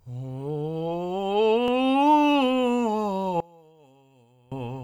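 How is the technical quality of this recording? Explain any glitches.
The recording has one clear glitch near the end. From 3.40 to 4.52 s, one stereo channel was likely inverted in polarity, so the shared centre content cancels in mono and the music drops by about 28 dB to a faint residue.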